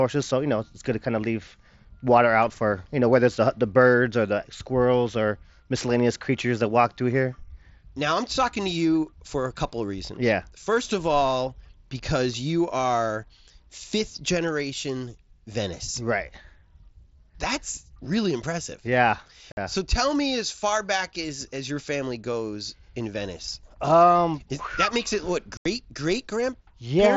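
At 19.52 to 19.57 s and 25.57 to 25.66 s, unconcealed Bluetooth headset packet loss cuts abrupt holes of about 52 ms and 83 ms into the speech. Consecutive voice packets on the mSBC link never arrived, and nothing filled the gaps.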